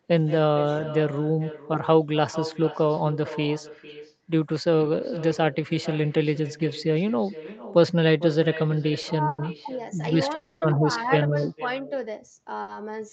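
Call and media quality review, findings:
Call and media quality review, findings:

Echo with no canceller, throughout: every phrase shadowed by a quieter, thinner copy about 15 dB down, roughly half a second late. Far-end loudspeaker feeding its microphone, round trip back through the network, no echo cancellation removing it.

Short stall from a late packet, 9.01–9.06 s and 12.62–12.71 s: sound held too long with a slight buzz or dip, 20 ms and 60 ms of fill. Packet missed its slot, jitter buffer ran dry, receiver stretched the last sound and resumed, nothing lost.

Call audio freeze, 9.27–9.41 s (110 ms) and 10.35–10.65 s (270 ms): sound continues as a fading buzz or hiss rather than silence, then picks up where it stopped. Likely packets held up in transit, jitter buffer empty, gap inserted with nothing missing.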